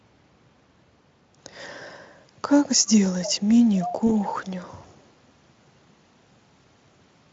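Speech, run through a Speex codec that sounds clean here, but with two problems. At 3.23 to 3.32 s and 3.81 to 3.92 s there's a delayed copy trailing by about 280 ms, quieter the first time and somewhat louder the second. That's an echo leak, likely from a far-end speakerphone whose echo canceller let some pickup through. Then at 4.07 to 4.10 s you get a brief stretched sound that fades as the voice briefly thins out. That's VoIP packet loss concealed by the speech codec, which fits a single lost 20 ms frame being extrapolated and faded.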